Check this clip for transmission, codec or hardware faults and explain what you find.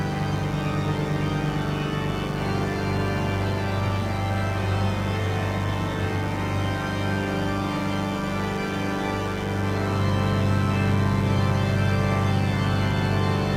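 A hardware fault is present: mains buzz runs through the entire clip. Somewhere in the chain, a dimmer, rectifier or unshielded lead is coupling sharp switching spikes from a 50 Hz supply into the audio, two per mains cycle. Each spike carries a dense stack of 50 Hz harmonics reaching up into the kilohertz range, so the interference is a steady, raspy buzz rather than a pure low hum. It sits about 15 dB below the wanted sound.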